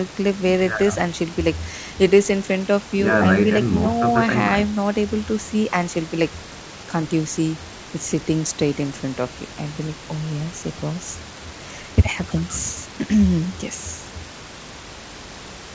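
No technical faults can be heard anywhere in this speech recording.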